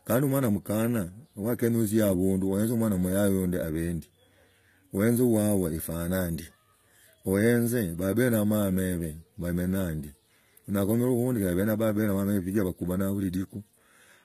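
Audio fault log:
Throughout: HE-AAC compression, likely the cause of plainly audible damage to the speech. The treble above the core band is rebuilt from copied lower bands, so sibilants sound gritty and lispy, consistent with roughly 20 kbps, and nothing remains above 14.9 kHz.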